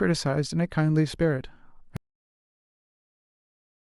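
The input feed was likely lost at 1.97 s, with the recorder continuing to write silence, an audio dropout to silence. The speech cuts off mid-flow and never returns, leaving dead silence, with no room tone at all, from there to the end.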